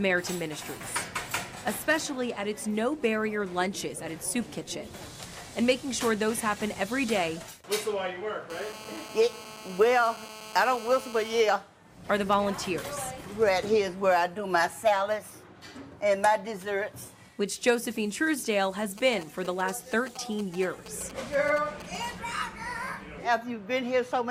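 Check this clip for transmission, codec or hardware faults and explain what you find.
Two bursts of radio interference from a nearby 2G mobile phone get into the audio hardware.

From 8.50 to 11.41 s there is GSM phone buzz. A phone in a call transmits in bursts about 217 times a second, and the audio circuitry rectifies those radio pulses into the signal path. The result is a hard, raspy buzz at 217 Hz, rich in harmonics and unrelated to the sound itself. It is nearly steady through the stretch, about 15 dB below the signal.

From 18.98 to 22.06 s come GSM signalling bursts. Here the phone is sending only short groups of radio bursts, the kind of exchange a handset makes with the network. The same rectification turns each group into a short buzz, so the interference arrives as a galloping dit-dit-dit of brief 217 Hz buzzes rather than a continuous tone. It sits at roughly the same level as the earlier buzz.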